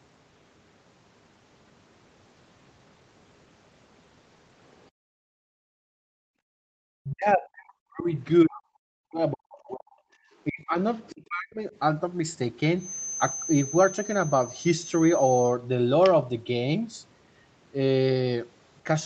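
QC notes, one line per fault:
4.91 to 6.74 s, background gated by the echo canceller: the room sound sinks by as much as about 40 dB, then comes back, for around two seconds in all. While the loudspeaker played, the canceller clamped the microphone down hard, taking the background with it.
7.02 to 8.11 s, 8.43 to 9.99 s, 10.49 to 10.76 s and 11.11 to 11.61 s, speech suppressed in double talk: the talker's speech dips deeply, roughly 40 dB at worst. The likely cause is both sides talking at once, leaving the canceller unable to separate them, so it turned everything down.
10.94 to 11.15 s, other side's voice leaking through: a faint second voice surfaces briefly, roughly 30 dB under the main speech. It is likely loudspeaker playback of the far end that the echo canceller failed to remove fully from the microphone pickup.
12.75 to 15.59 s, feedback whistle: a thin, steady tone at 6.2 kHz sits about 15 dB below the speech, swelling and fading slowly in level. 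The likely cause is a loudspeaker-to-microphone loop held just short of runaway feedback, so one frequency keeps ringing.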